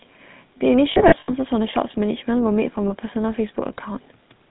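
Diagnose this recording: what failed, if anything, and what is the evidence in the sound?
The whole recording has a buzzy, gravelly roughness, with nothing audible above 4 kHz and a coarse grain on every syllable. That points to the codec stage, specifically the GSM full-rate codec, and the plainly audible damage fits its 13 kbit/s mode. The codec reduces the speech to a vocal-tract filter driven by a sparse, regularly spaced pulse train. Discarding most of the excitation detail that way leaves the characteristic buzz, and the codec's narrow band removes the upper frequencies.

Between 0.92 and 1.33 s the speech turns into a rough, metallic ringing, broken up across about 360 ms, with the longest continuous stretch lasting about 70 ms. A shorter ring of the same kind occurs at 2.88 to 2.93 s. These are lost GSM frames, a network-stage fault. In total about 200 ms of audio is missing in the first event, which fits roughly ten dropped 20 ms frames. 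In each gap the decoder repeats the last good frame's parameters, with the level falling from the second lost frame on, which produces the held, metallic ring.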